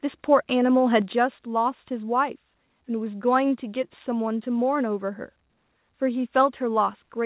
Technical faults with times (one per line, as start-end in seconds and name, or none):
1.02 microphone volume stepped down